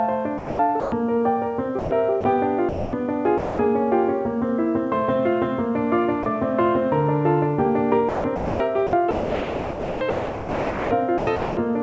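The audio arrives over a call path with nothing above 8 kHz, which fits a G.722 link. Sound chopped by the voice detector appears three times. From 0.38 to 0.92 s, about 330 ms is swapped for comfort noise. From 1.79 to 3.59 s, about 600 ms is lost. From 8.09 to 11.57 s, about 2.46 s is lost. The sender's detector likely kept switching off and on, so the sound turns choppy. Sound dropped by the voice detector occurs once, from 6.23 to 6.26 s. A 30 ms sliver gives way to steady comfort noise, likely because the detector briefly judged that moment to be background.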